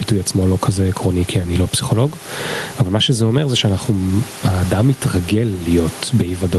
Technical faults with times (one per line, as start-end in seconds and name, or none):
0.00-6.59 gain pumping